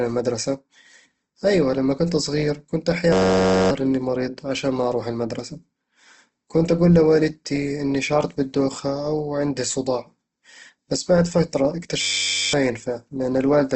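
Across the whole recording the speech carries the grainy, plainly rough texture of likely Opus compression in its music-oriented CELT mode, at a low rate around 16 kbps. The encoder preserves each band's energy and fills starved bands with folded or noise-like content. This makes voiced sounds turn rough and gritty rather than producing the watery, swirling holes typical of MP3. Nothing is present above 8.2 kHz, so the top end is capped at wideband.

From 3.13 to 3.71 s, right after "لما كنت صغير كنت" and before "إني مريض عشان ما", a system hang loop replaces the audio with a steady buzz. A 10.67 ms fragment repeats about 55 times at 93.8 Hz, which fits a 512-sample buffer being replayed while the system froze. Around half a second of speech is lost. The same buzz returns from 12.01 to 12.53 s, just after "بس بعد فترة", with about 49 repeats. The exact, unchanging repetition is what separates this from a dropout or codec glitch.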